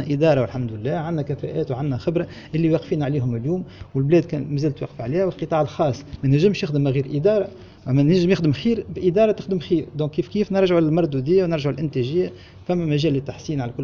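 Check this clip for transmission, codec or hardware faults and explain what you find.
No transmission, codec or hardware faults found in this clip.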